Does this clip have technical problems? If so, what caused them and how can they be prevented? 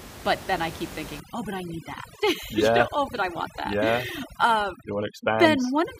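Yes. Overdone noise removal runs from 1.2 s, just after "then I keep", to the end. The noise reducer, set far too strong, mutes frequency bands near its noise estimate and takes quiet speech detail with them. The room noise, about 15 dB below the speech, drops and breaks up into twinkling specks. To prevent this, use a milder reduction setting and check the result by ear before accepting it.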